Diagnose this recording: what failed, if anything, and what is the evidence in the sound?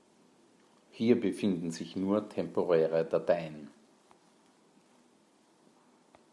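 Nothing failed: the sound of this speech recording gives no evidence of a fault at any stage.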